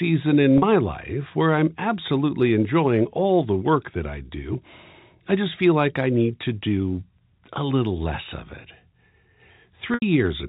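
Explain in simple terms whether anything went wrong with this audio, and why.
Packet loss with pitch repetition occurs at 0.58 s, just before "life where I'm absolutely", and at 9.94 s. About 40 ms and then 80 ms of audio went missing, so the receiver replayed the last bit of voice to fill each gap. The longer gap fades out before the speech returns, over the telephone-quality line.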